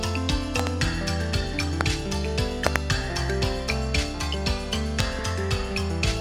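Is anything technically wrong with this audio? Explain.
Yes. Loud pops occur at 0.60–0.69 s (a double), 1.81–1.83 s, 2.67–2.78 s (a double) and 5.00–5.02 s. Each is likely a brief voltage spike from a switch, static or a driver glitch, heard as a sharp thump roughly 20 to 25 dB above the sound, which continues underneath.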